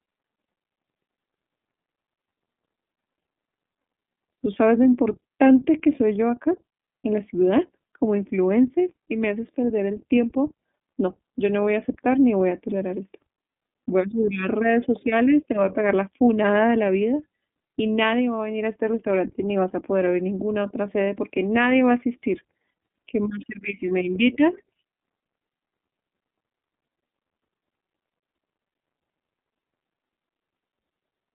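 From start to finish, the speech carries the sound of the iLBC codec. Nothing above about 3.7 kHz survives, and the band sits roughly between 200 Hz and 3.5 kHz, so the speech is thin and telephone-like. Each 30 ms frame is coded on its own without drawing on the previous one, which fits the 13.33 kbps mode. The coding damage is plainly audible as a rough, slightly synthetic edge on the speech.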